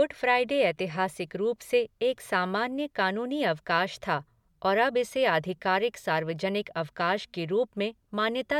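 No technical faults are audible.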